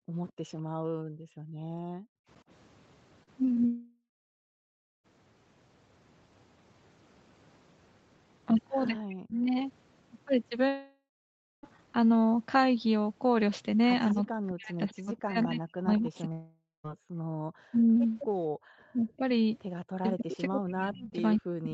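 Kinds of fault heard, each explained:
Background gated by the echo canceller: The room noise sinks by about 40 dB between 0 and 2.28 s and again from 16.99 to 18.65 s. The drop hits only the background, not the talker. It comes and goes with the canceller clamping the microphone.
Echo leak: A delayed copy of the speech arrives about 210 ms after the original, briefly near 0.3 and 18.2 s and for a longer stretch from 19.83 to 21.13 s. This is likely residual loudspeaker pickup the canceller missed. It is an added repeat, not a dip.
Short concealed packet loss: Brief smears at 3.23, 3.45 and 3.55 s fill holes of 40, 20 and 20 ms with continued sound before real audio blends back. They are too short to decay into silence, which separates them from a dropout.
Long network dropout: At 3.66–5.06, 10.68–11.65 and 16.32–16.86 s, the last sound stretches into a fading buzz, then silence lasting 980, 580 and 170 ms. 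Audio resumes with the middle missing, likely from a stalled network stream rather than concealment of a single packet.
Speech suppressed in double talk: The talker's own speech dips deeply or cuts in pieces at 9.09–9.46 s, across much of 14.13–17.72 s, and from 18.93 s to the end. This is likely an echo canceller ducking both sides during overlap. Unlike gating, the voice itself loses level.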